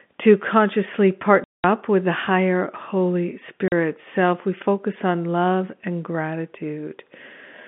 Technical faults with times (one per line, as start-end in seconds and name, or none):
1.44-1.64 packet loss filled with silence
3.68-3.72 packet loss filled with silence